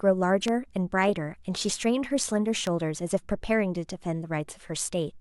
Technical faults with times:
0.48-0.50 loud pop
2.67-2.69 loud pop

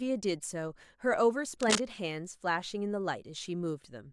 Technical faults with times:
1.60-1.81 cable scratch noise

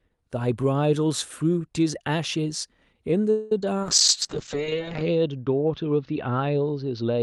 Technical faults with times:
3.30-3.52 call audio freeze
3.61-3.74 short concealed packet loss
3.83-7.23 call bitrate drop

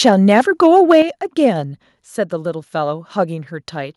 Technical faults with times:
0.05-0.99 microphone overload
1.02 microphone volume stepped down

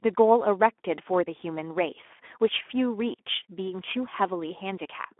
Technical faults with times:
0.00-5.19 Speex codec

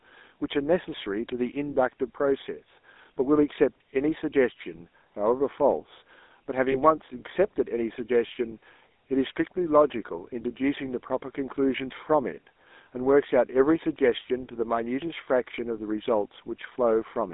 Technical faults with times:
0.00-17.34 GSM full-rate codec
6.72-6.76 lost GSM frames

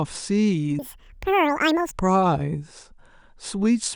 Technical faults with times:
0.79-1.97 wrong sample rate

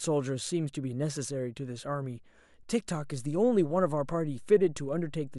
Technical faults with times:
2.97-5.38 DC step

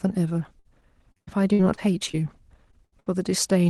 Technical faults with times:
0.59-2.15 repeated packet loss (robotic sound)
2.71-2.75 short concealed packet loss
2.85-3.08 burst of packet loss

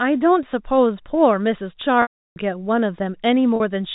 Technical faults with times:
2.02-2.36 packet loss with pitch repetition
3.56-3.60 packet loss with pitch repetition

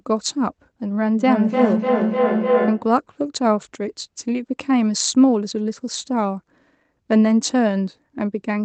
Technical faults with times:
1.18-3.02 feedback howl

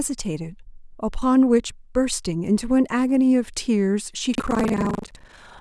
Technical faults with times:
4.31-5.61 buffer tearing

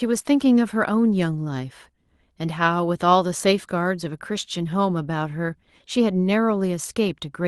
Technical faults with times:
4.09-4.11 lost packet rebuilt from error correction

